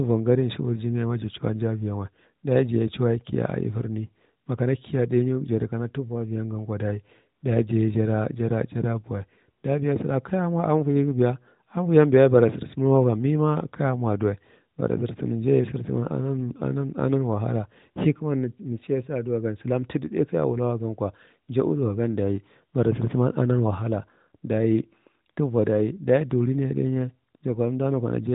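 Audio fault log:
No faults are present in the speech. The AMR narrowband mobile codec path limits the sound to below about 3.8 kHz, with only light coding texture that fits its 12.2 kbps mode.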